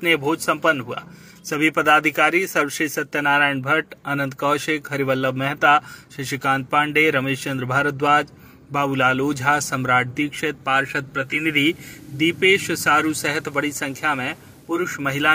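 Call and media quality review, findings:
Digital radio blending to analogue, 11.12 to 14.9 s: hiss rises to roughly 35 dB below programme, level unchanged. Hybrid receiver lost digital lock and cross-faded to the FM simulcast over about 348 ms, then blended back at 14.9 s. Receiver diversity/blend logic.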